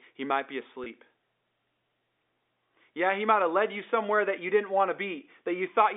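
At 0.84 to 0.86 s, just after "he might be", there is a packet loss with pitch repetition. About 20 ms of audio went missing, which fits a single lost packet, and the receiver filled the hole by replaying the last pitch cycle. The result is a brief, faintly buzzy stretch where the tone seems to hang. Unlike a plain dropout, there is no silent gap or click, and the narrow telephone band of the G.711 line stays intact around it.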